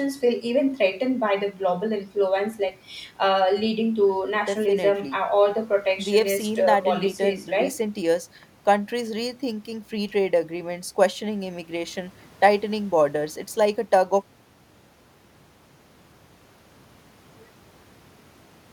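A speech recording with no audible technical faults: no dropouts, clicks, distortion or level problems stand out anywhere in it.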